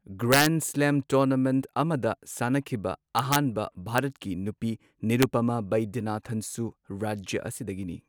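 Integer overflow at 0.32–0.46 s, 3.19–3.36 s, 3.98 s and 5.22 s: loud speech peaks driven up to about 3 dB past the integer limit wrap to the opposite sign, producing violent cracks.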